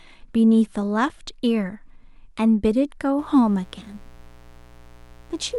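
Speech with a mains buzz entering at 3.19 s and running to the end: a raspy 60 Hz hum, roughly 30 dB below the speech. Switching spikes, as from a dimmer or unshielded line, show on a spectrogram as evenly stacked horizontal lines at 60 Hz multiples reaching several kilohertz.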